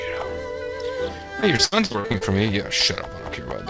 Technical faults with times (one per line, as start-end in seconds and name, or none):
1.40-2.23 repeated packet loss (robotic sound)